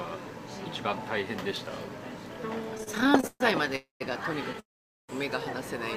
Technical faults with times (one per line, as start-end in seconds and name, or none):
2.75-3.76 repeated stalls (stutter)
3.76-4.02 call audio freeze
4.60-5.11 call audio freeze